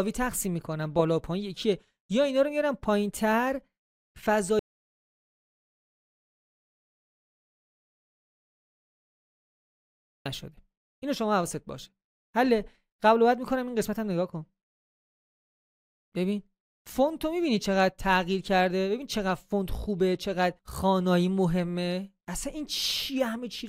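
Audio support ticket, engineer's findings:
Audio dropout to silence, 4.59 s to 10.26 s, 5.66 s lost. Sound cuts off and resumes abruptly. Gap is silent with no room tone, unlike a closing noise gate. Likely input disconnect or failed link while recording continued.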